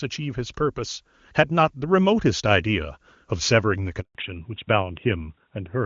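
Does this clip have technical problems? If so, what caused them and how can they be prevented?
Yes. There is a handover gap from 4.01 s to 4.15 s. The speech fades out within a few tens of milliseconds and stays silent for 140 ms, which is the sound of the call being moved between networks while no speech frames reached the receiver. Whatever was said during that interval is gone rather than delayed. Prevention: configure the network for make-before-break handover with tighter timing so frames keep flowing across the switch.

Right after the gap, from 4.15 s to the end, there is a fallback to narrowband. Before it, the HD Voice path carries content up to about 7 kHz with only faint or no audible coding damage, consistent with AMR-WB at its top rate. After 4.15 s nothing remains above 4 kHz, and the speech sounds duller and rougher, which points to the new link negotiating AMR-NB at around 12.2 kbit/s. 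Prevention: make sure the target network and every interconnect along the route support AMR-WB end to end, so the call keeps the wideband codec after a handover.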